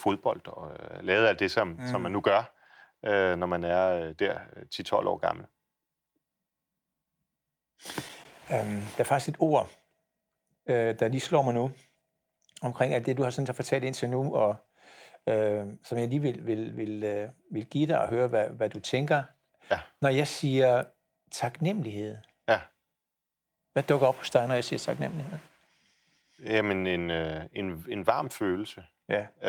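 No technical faults can be heard anywhere in this speech recording. There is nothing to mark at any point in the timeline.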